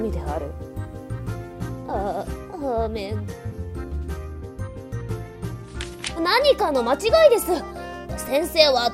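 At 3.51 s the audio skips ahead. Roughly a fifth of a second of sound is gone. Nothing fills the hole. The material on either side is butted straight together. This happens when a stretch of audio is dropped while later audio is already queued. That can be loss in transit or a jitter buffer throwing away its oldest contents to catch up. Playback lands about 200 ms further on. It sounds like an abrupt jump, with the sound briefly truncated mid-flow.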